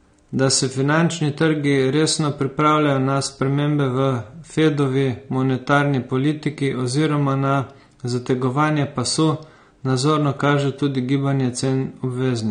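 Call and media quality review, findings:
Likely AAC compression at a low bitrate, around 32 kbps, throughout: band limit near 9.7 kHz, sparse quantised spectrum; speech dull, smeared, warbling sibilants.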